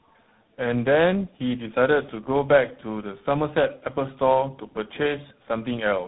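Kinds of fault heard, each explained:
Tandem speech coding: the speech has passed through three speech codecs in a row, each re-encoding the previous one's damage, so it sounds rough, muffled and warbly, with nothing above 3.9 kHz. A single low-rate codec sounds cleaner than this stacked roughness.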